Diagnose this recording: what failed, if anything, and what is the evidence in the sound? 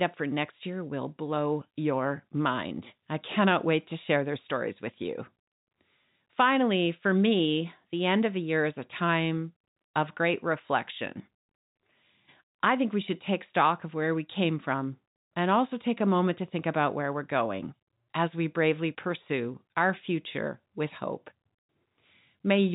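Nothing in this speech recording points to a failure at any stage. The G.711 telephone coding path is working as intended, with the band ending at about 3.8 kHz and the faint level-following hiss that telephone companding leaves behind.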